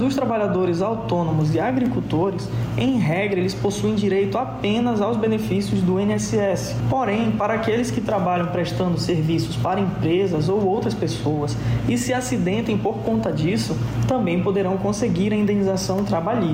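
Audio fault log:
Throughout: gain pumping, background swelling about 10 dB in gaps and ducking under loud sounds, likely from excess gain hitting a fast limiter, unlike a gate's abrupt cutoffs.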